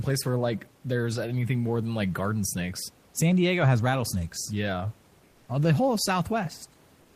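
Nothing stood out on listening to this speech, apart from the room's own background noise sitting about 34 dB below the voice.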